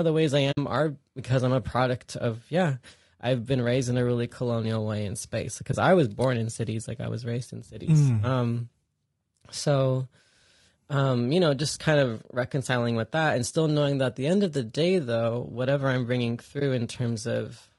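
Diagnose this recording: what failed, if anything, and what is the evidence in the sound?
Codec stage: the speech is rough and grainy throughout, with noise filling the gaps between voice harmonics and an upper band that sounds thin and synthetic. That points to low-delay AAC compression, likely AAC-ELD at a low rate, around 32 kbps. Its short frames smear pitch structure. Unlike broadband hiss or mains hum, the noise follows the voice and vanishes in pauses, because the coder generates it along with the speech.

Network or transport into the decoder: the audio drops to silence at 0.51–0.58 s, 5.71–5.75 s and 16.59–16.62 s. Each gap fades out and back in. This is AAC frame loss with muting. The decoder zeroed the missing frames, and the overlapping windows soften the edges. The first hole matches about three frames lost, the others one each. A sample-level dropout or buffer underrun would cut hard and click.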